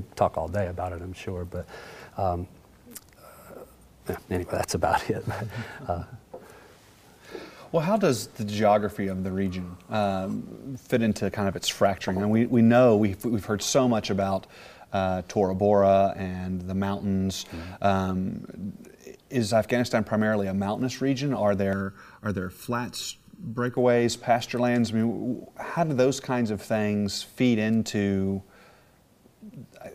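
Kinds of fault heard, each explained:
Channel delay (comb filtering): from 21.73 to 23.77 s, one channel of the original pair runs late by a bit under a millisecond, and when the two are folded to mono, content common to both cancels at regularly spaced frequencies. The first notch falls around 700 Hz, with further notches repeating roughly every 1.4 kHz above it, so for those two seconds the sound turns hollow and phasey, with fixed holes in the spectrum.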